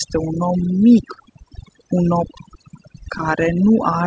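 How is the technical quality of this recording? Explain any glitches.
Technical quality is held back by heavy-handed noise removal across the whole recording, plus two brief dropouts in the speech. The audio tops out around 8 kHz, which points to a wideband call codec like G.722.

Overdone noise removal runs from start to finish. The suppressor was set so aggressively that any frequency band sitting near its noise estimate gets pushed way down or shut off, and the softer parts of the voice get caught too. The background drops and breaks up into little twinkling specks.

Short concealed packet loss hits twice: at 1.14 to 1.18 s, right after "un om", and at 3.18 to 3.21 s. Each time about 20 ms of audio didn't arrive in time, and the receiver covered the gap by extending the sound just before it, roughly 18 ms of fill the first time and 12 ms the second, then crossfading back into the real signal. 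You hear it as a quick smear or wobble in the speech.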